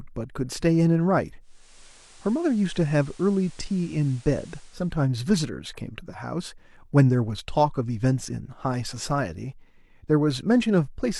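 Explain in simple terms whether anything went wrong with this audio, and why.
From 1.40 to 4.99 seconds the speech turns slightly quieter, with a hiss underneath. This is digital radio blending to analogue: the receiver lost its digital signal, faded over about half a second to the station's FM broadcast, then returned.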